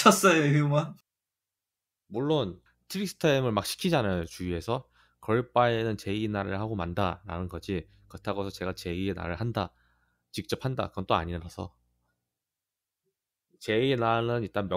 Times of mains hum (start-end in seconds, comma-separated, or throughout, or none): 7.37-8.87